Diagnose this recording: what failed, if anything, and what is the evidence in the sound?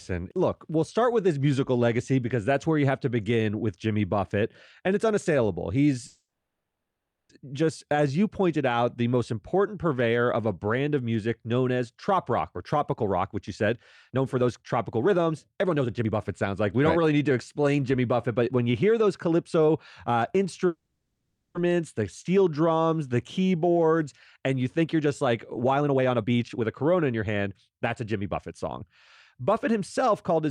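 Network: call audio freeze at 6.07–7.31 s and 20.67–21.57 s. Sound decays into a fading tail, then resumes intact, likely from delayed packets emptying the jitter buffer.

Jitter buffer speed-up at 12.13–19.28 s (117%), 24.79–28.84 s (120%) and 29.40–30.47 s (104%): speech runs faster at unchanged pitch as pitch periods are cut to shed delay.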